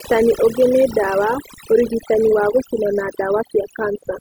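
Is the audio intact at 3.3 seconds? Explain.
No. Overdone noise removal runs through the whole clip, 3.3 seconds included. The noise reduction is set so hard that frequency bands near its noise estimate are pulled almost to silence, taking quiet parts of the speech with them. The background drops and breaks up into twinkling specks.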